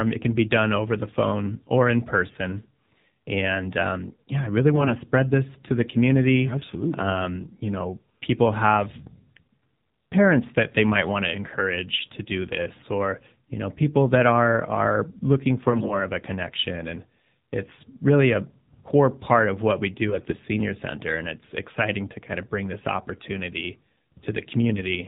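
The clip is speech, and the whole recording carries AMR narrowband mobile codec damage. It sounds like AMR-NB at 7.4 kbps: nothing survives above 4 kHz, and the vocal-tract model, driven by sparse pulses, makes the voice buzzy and synthetic. On a spectrogram there is a hard ceiling at 4 kHz with an empty band above it, and the harmonics look smeared and coarse. Four short bursts of AMR bit errors occur at 4.76–4.94 s (between "um yeah I really" and "spread this to the"), 11.94–12.03 s, 15.70–15.94 s (between "that are are looking" and "of a connection and") and 20.08–20.38 s (between "part of what we" and "center and it's exciting"). In each, flipped low-priority bits put the excitation pulses in the wrong places and skew the fine pitch, gain and spectral values, so the voice keeps roughly its pitch and level but turns hoarse, scratchy and gargly. The error rate is high, from several percent up to about one bit in ten. 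On a spectrogram these spans show broken, noisy harmonics with scattered energy below 4 kHz. The waveform keeps a similar envelope but looks ragged in detail.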